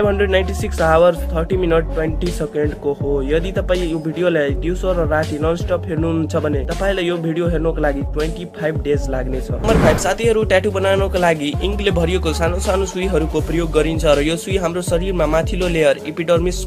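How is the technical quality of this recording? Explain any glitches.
No glitches or technical faults can be heard here.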